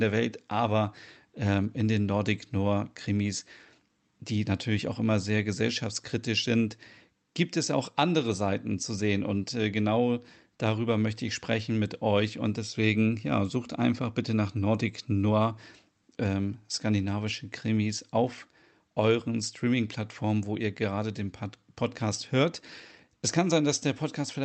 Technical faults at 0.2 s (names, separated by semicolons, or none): none